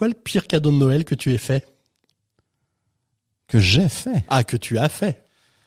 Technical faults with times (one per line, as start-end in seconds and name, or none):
none